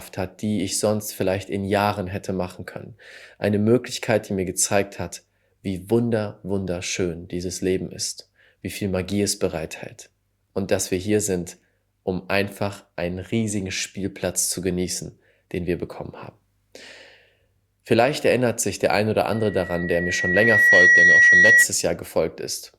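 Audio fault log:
19.32–21.66 s, loudspeaker feedback squeal: a single tone at 1.9 kHz rises out of the speech over about a second and a half and settles roughly 10 dB above it. The microphone is hearing its own loudspeaker, and at 1.9 kHz the loop gain has passed unity, so that frequency keeps feeding itself. On a spectrogram it is a lone horizontal line at 1.9 kHz that brightens. The waveform envelope swells into a dense, even block.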